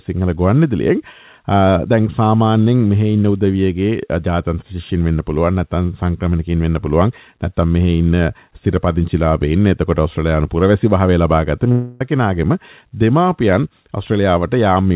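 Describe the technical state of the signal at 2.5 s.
At 2.5 s the signal is intact with no fault, carried over a WebRTC call path that passes nothing above 4 kHz.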